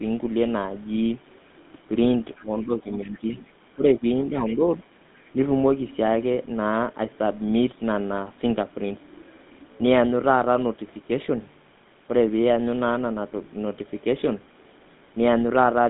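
Speech with a buzzy, gravelly roughness throughout and nothing above 3.8 kHz, the mark of the GSM full-rate codec, whose coarse pulse excitation and narrow band fit a 13 kbps phone line. Faint scraps of a second voice appear at 2.36–2.42 s, 2.95–3.35 s, 4.47–4.52 s and 5.18–5.30 s, far below the main speech and barely audible at the last. They are likely the other side's voice leaking through from the loudspeaker past the echo canceller. Between 2.39 and 4.61 s the main speech dips in pieces by roughly 10 dB, for well under a second in total. This is likely speech suppressed in double talk, with the canceller ducking both voices while they overlap.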